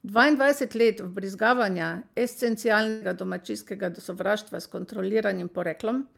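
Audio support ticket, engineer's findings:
Burst of packet loss, 2.89–3.03 s, just before "domačijskega sovraštva s". About 0.12 s of real audio missing; the receiver's concealment fills roughly 0.12 s by extending the last sound and fading it, heard as a held buzz or a decaying hiss. Component: network path / jitter buffer, with concealment on the decoder side. Spectrogram: smeared, held spectrum dimming over ~120 ms, then an abrupt restart. Waveform: shrinking envelope, then a step into new material.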